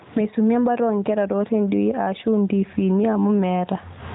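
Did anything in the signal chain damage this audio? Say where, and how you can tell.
Yes. There is gain pumping throughout, likely from a fast limiter fighting excessive input gain. The gain swings about 15 dB, recovering between loud sounds and ducking under them, whereas a noise gate would silence the gaps.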